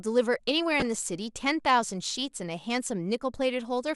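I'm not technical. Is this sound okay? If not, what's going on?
No. From 0.80 to 1.01 s the speech picks up DAB burbling, short blips of noise. Weak digital radio reception corrupted bits, so separate pitch bands get short blips of noise.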